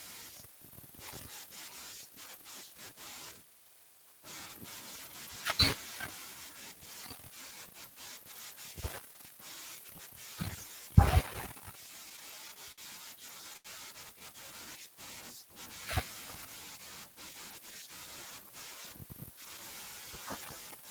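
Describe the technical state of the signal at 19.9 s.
At 19.9 s the signal is intact, with no audible fault at that point in the speech.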